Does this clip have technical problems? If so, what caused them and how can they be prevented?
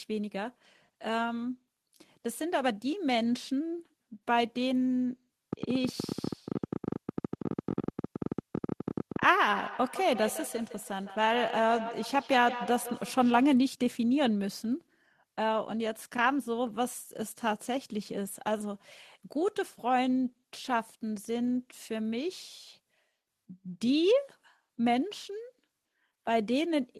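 Yes. From 5.53 to 9.24 s there's a train of clicks, around 70 irregular pops at roughly 16.5 per second, jumping well above the speech. That's likely interference or a faulty connection or power supply. Keep gear away from noisy equipment and check cables and the interface.

From 9.49 to 13.64 s there's a feedback echo between two devices. The speech comes back about every 150 ms, peaking about 10 dB below the voice, because a second device in the room replays the call and the first mic picks it up again. Mute or remove extra devices joined from the same room.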